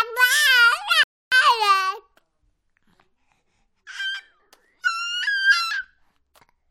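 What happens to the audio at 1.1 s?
At 1.1 s the audio is in a rebuffering stall, running from 1.03 s to 1.32 s. The player exhausted its downloaded data and halted playback until more arrived, so the sound drops abruptly to silence for about 285 ms. When data catches up, playback resumes from the exact point where it stopped. Nothing is skipped or repeated; the gap only inserts dead time, pushing everything after it later by that same amount.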